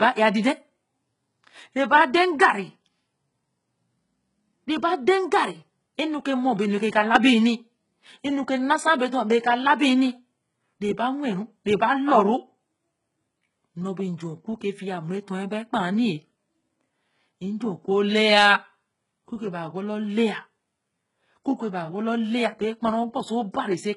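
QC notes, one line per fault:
Throughout: HE-AAC compression, likely the cause of treble that sounds bright but synthetic. Upper bands are rebuilt from copied lower ones, so s sounds turn gritty and lispy with heavy damage. Nothing lies above about 11.1 kHz, a rate near 12 kbps. Unlike a plain low-pass, the top isn't dull.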